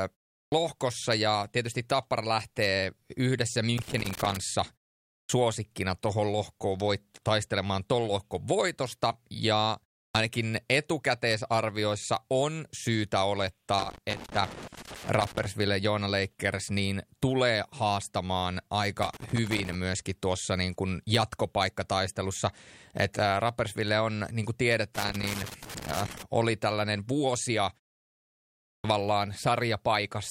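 The output device drops into a sleep state during short silences and is slow to wake, which causes a clipped start after a pause. Speech restarts abruptly, missing about 60 ms of its onset. This happens first at 0.46–0.52 s, after a 0.38 s pause. A loose connector crackle follows at 3.78–4.37 s, just after "lähtee yhdessä": a failing contact makes and breaks, chopping the signal into an irregular scratchy burst. The device wakes late again at 5.24–5.29 s, losing about 54 ms after a 0.55 s pause. At 10.09–10.15 s, between "tuon lohkon voitosta ja" and "etukäteisarvioissa on syytä", about 57 ms is swallowed. Connector crackle returns at 13.79–15.46 s and 19.03–19.75 s, and again at 24.95–26.23 s between "on niin kuin" and "oli tällainen vuosia". A final clipped start at 28.78–28.84 s loses about 61 ms after a 1.07 s pause.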